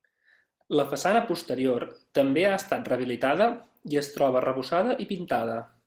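Throughout the speech, Opus voice compression is plainly audible. The voice sounds hoarse and slightly robotic, which fits hybrid coding at around 16 kb/s. A spectrogram shows a coarse, patchy upper band above 8 kHz, with blocky texture consistent with 20 ms frames.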